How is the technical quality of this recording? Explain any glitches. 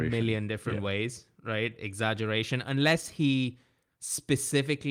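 Technically the recording holds up well, with no audible faults anywhere in the signal.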